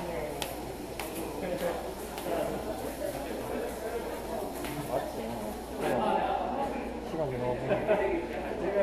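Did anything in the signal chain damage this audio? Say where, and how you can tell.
Yes. De-emphasis applied wrongly, from 5.93 s to the end of the clip, points to the playback or decode stage. At that point the sound turns dull and muffled. The top end falls away along a smooth slope and sits about 11 dB down at 10 kHz relative to 1 kHz. A de-emphasis filter switched on mid-stream removes treble that was never boosted by pre-emphasis, or cuts it a second time, so the cut stays as a net loss of brightness.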